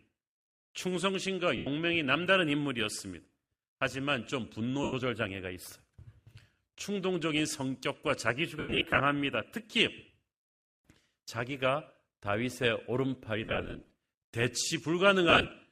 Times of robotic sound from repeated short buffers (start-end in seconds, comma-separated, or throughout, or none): none